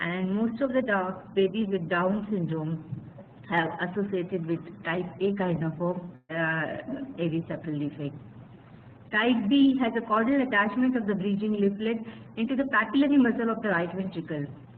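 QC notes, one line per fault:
6.15 to 6.31 s, burst of packet loss: a short run of consecutive packets failed to arrive in time, so the receiver concealed the hole by extending the last received sound for about 136 ms and letting it fade, followed by roughly 30 ms of silence. Playback then picks up later in the stream, so about 140 ms of the original audio never plays and the sound skips forward abruptly.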